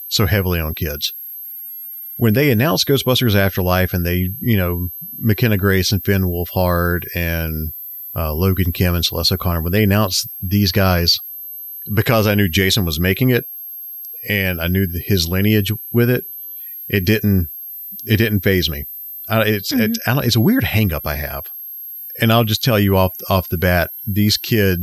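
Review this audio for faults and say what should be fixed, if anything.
Switching supply whistle runs throughout the speech, a thin high tone wandering between about 12.2 and 12.8 kHz, sitting roughly 15 dB below the speech. A switching power supply feeding the recording chain is dropping into an audible burst mode or beating against a second supply, and as the load shifts, its pitch drifts across that band. It should be removed with a narrow notch or re-recorded. To prevent it, power the interface and preamps from a linear or well-filtered supply, and keep switching adapters away from the audio path.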